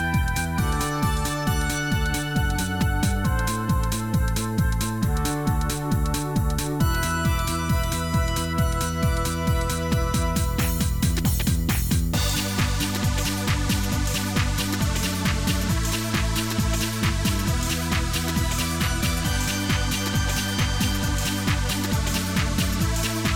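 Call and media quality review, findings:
No audible faults found on review; no defects to log against capture, transport or playback.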